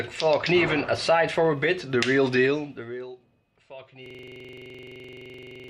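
From 4.06 s to the end, a system hang loop repeats one 42.67 ms slice, fitting a 2048-sample buffer, as a 23.4 Hz stutter; the waveform shows identical repeating blocks, the spectrogram vertical stripes.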